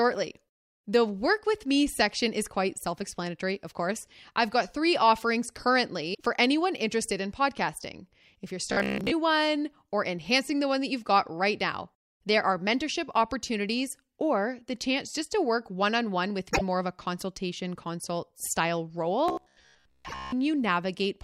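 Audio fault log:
6.13–6.21 s, 16.53–16.61 s and 20.08–20.14 s, broken MP3 bit reservoir: each spot lasts 64 to 88 ms. The audio skips ahead, and the next few frames come out garbled as a chirp, noise burst or short hole. The likely cause is frames cut from the stream, so the next frame borrows reservoir bytes that now belong to a different frame. The span of a few frames is consistent with 24 ms frames. Unlike a plain dropout, the timeline jumps forward.
8.72–9.11 s and 19.28–20.32 s, robotic sound from repeated short buffers: in both runs, most of the audio is replaced by repeats, and a rigid, metallic buzz at 66.8 Hz is imposed. Speech follows the original only loosely. The likely cause is audio arriving too seldom, so playback loops the last chunk, which fits a buffer of about 15 ms. Unlike codec warble, the buzz holds a fixed rate regardless of the voice. The second run also contains the 20.08 s reservoir glitch.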